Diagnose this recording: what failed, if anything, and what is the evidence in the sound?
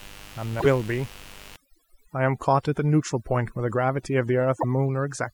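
A steady, raspy mains buzz runs under the speech for the whole clip, at about 25 dB below it, built on 50 Hz. That points to the analogue wiring. A dimmer, rectifier or unshielded run is injecting switching spikes twice per cycle, and their harmonics spread into kilohertz.

Damaged data in the compressed stream shows up at the codec or storage stage. The stream is damaged from 0.56 to 0.66 s and from 4.56 to 4.64 s. Corrupted bytes made the decoder misread frames, lose sync and hunt for the next valid header.

Overdone noise removal sets in at 1.56 s and lasts to the end. The background drops and breaks up into twinkling specks. The processing stage suppressed bands near its noise estimate too aggressively, taking the quiet speech components with them.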